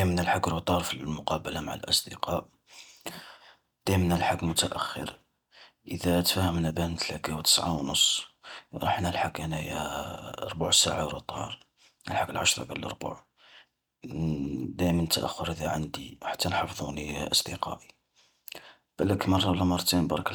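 Listening to this speech recording, nothing technical stood out as wrong at any point.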